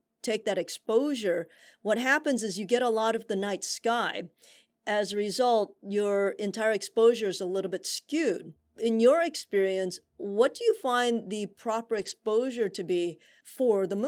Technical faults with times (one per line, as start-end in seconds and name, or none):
11.93-12.11 lost packet rebuilt from error correction